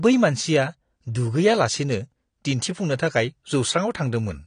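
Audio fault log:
Throughout, AAC compression. The speech sounds dull and smeared, with a fizzy, warbling edge on sibilants and held sounds. Nothing is heard above 9.7 kHz. The likely cause is an AAC-LC encode at a low bitrate, and the damage fits a 32 kbps stream. At that rate the encoder drops its cut-off and quantises each frame coarsely. Weak bands are left empty or filled with substitute noise, which gives the fizz.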